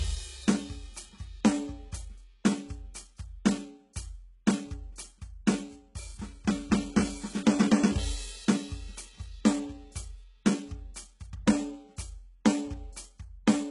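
Music, likely squeezed through HE-AAC at a very low bitrate, which fits around 12 kbps, with its treble rebuilt by band replication throughout: heavy damage, nothing above 11.1 kHz, and gritty, metallic highs.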